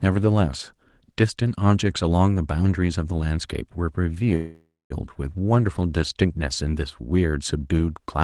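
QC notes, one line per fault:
4.35–4.93 s, call audio freeze: the sound stalls into a fading buzz, silent for its last 0.22 s, then resumes where it stopped with nothing lost. Packets likely held in transit emptied the jitter buffer; the receiver extended the last sound, adding 0.55 s delay.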